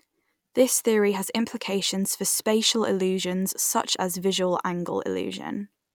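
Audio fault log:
No faults are present in this speech recording, and the signal holds steady and intact at every point.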